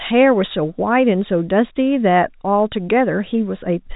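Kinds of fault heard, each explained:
Nothing here counts as a fault; the speech simply carries the narrow telephone-band sound of G.711 coding, with nothing above about 3.8 kHz coming through.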